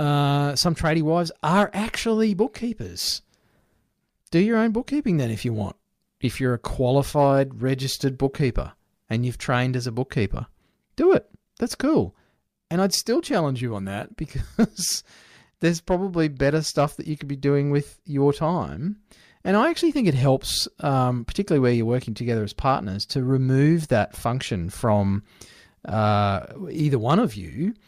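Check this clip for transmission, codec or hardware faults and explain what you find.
Nothing in the recording points to a problem in how it was carried, encoded or captured. The speech comes through without any audible disturbance.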